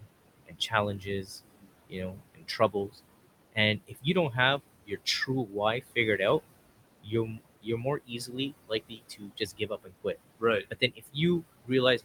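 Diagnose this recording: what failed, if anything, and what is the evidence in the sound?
The call-processing stage's noise suppressor is working too hard. It pulls the room noise, which sits about 14 dB under the speech, down by about 21 dB in the gaps, then lets it back under the talking, so the residue pumps.

There's also speech cut by the noise suppressor, because it's mistaking parts of the talker for noise. From 0.46 to 2.99 s, roughly a second of speech drops by up to about 21 dB. From 3.52 to 6.2 s, about half a second dips by about 20 dB. From 7.02 s to the end, the same swallowing recurs at about 21 dB.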